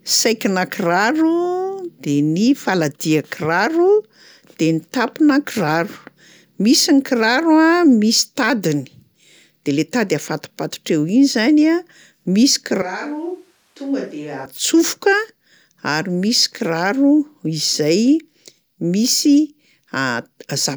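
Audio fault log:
12.82–14.45 s, switch to a distant microphone: speech turns roomy and hollow with thinner bass, about 10 dB quieter with more room noise, likely a farther pickup standing in for the close microphone.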